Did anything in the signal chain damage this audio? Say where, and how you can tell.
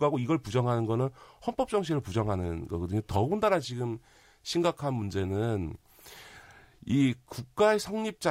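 No, no stage of the signal chain, from capture through to playback, has left any audible damage on this speech. The sound holds together consistently from its opening moments to its close.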